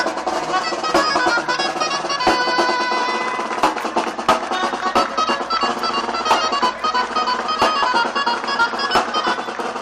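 No dropouts, clicks, distortion or other technical faults turn up anywhere in the recording.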